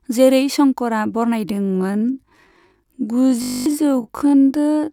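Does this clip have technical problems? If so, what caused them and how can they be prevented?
Yes. From 1.45 s, right after "जेरै शंकरआ", to the end, a time-stretched section, likely from software slowing audio to about half speed with pitch kept, drags. Prevent it by recording or editing to the required length instead of stretching.

From 3.42 to 3.66 s, a system hang loop froze the computer while the hardware replayed a 20 ms ring buffer 12 times, giving a steady 50 Hz buzz and losing about a fifth of a second of sound. Prevent it by keeping drivers updated and the recording system free of competing load.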